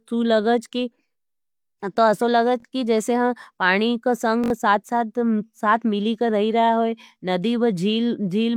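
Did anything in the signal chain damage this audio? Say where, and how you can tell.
Yes. A repeated buffer at the driver or buffer stage: a 21 ms slice stutters with hard joins at 2.60–2.65 s and 4.44–4.50 s, which fits a starved 1024-sample buffer replaying.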